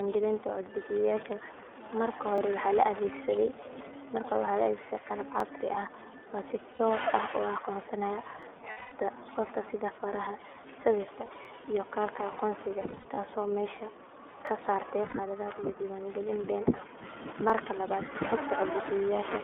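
Throughout, the speech carries the iLBC codec: at 13.33 kbps with 30 ms frames it is confined to roughly 250 Hz to 3.5 kHz and sounds plainly rough and synthetic. This is a fixed narrowband coloration across the whole clip, unlike the brief, isolated events below.

Overlapping chunks first appear at 2.38 s, then at 5.40, 8.43 (just after "u aqoonsanaya"), 11.45, 14.47 (just before "ka saartay") and 17.50 s. Each is a 23 ms stutter where a chunk boundary replays audio. Its strict 3 s spacing separates it from random packet loss.

Lost iLBC frames fall at 6.74 s (60 ms), from 8.70 to 8.92 s (210 ms, between "u aqoonsanaya" and "qofka sida faraha"), at 11.26 s (30 ms), from 12.81 to 13.18 s (180 ms scattered, longest run about 70 ms), at 15.09 s (60 ms) and at 16.76 s (30 ms). The decoder fills each gap with a held, buzzy vowel instead of silence.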